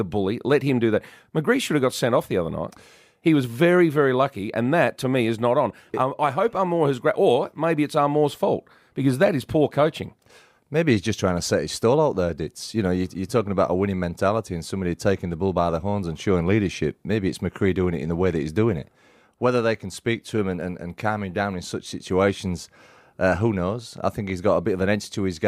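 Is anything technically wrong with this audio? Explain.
No, nothing is technically wrong with this audio.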